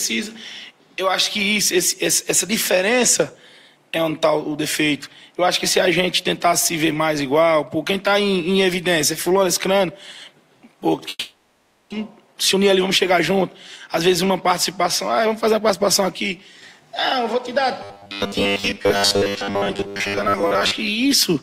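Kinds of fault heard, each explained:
Long network dropout: From 11.09 s to 11.94 s the last sound drags on as a fading buzz, then goes briefly silent. Sound resumes with about 0.6 s missing, likely because no packets arrived for that stretch and the receiver concealed the gap.
Jitter buffer speed-up: The sound runs fast at unchanged pitch, hurried at 10% fast from 12.2 to 13.39 s, and 4% fast from 14.83 to 15.87 s. The receiver trims many short pitch-period pieces to shrink an overfull buffer after the delay dropped.
Robotic sound from repeated short buffers: From 17.83 to 20.8 s the sound turns into a rigid, metallic 100 Hz buzz, likely because audio arrived too seldom and the last 10 ms kept repeating. Most of the real audio there was skipped.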